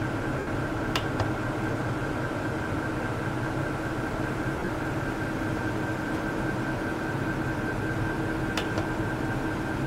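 Around 0.39 to 0.47 s, then 1.99 to 2.01 s, and again from 4.52 to 4.68 s, you get lost LE Audio frames: 80 ms, 20 ms and 90 ms of missing audio, which fits 10 ms frames. The decoder fills each gap by repeating the last spectrum with scrambled phase, so tones go to a brief noisy smear. The last burst is choppier, scattered over 160 ms with runs of about 30 ms at most.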